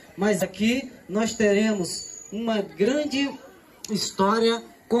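A brief glitch breaks through the audio from 0.38 to 0.43 s, and a second, much shorter blip follows at 2.87 s. Both are damaged data in a compressed stream: at these two points the encoded bytes are wrong, so the decoder cannot read the affected frames properly, loses its place in the stream and has to hunt for the next valid frame header before clean playback resumes.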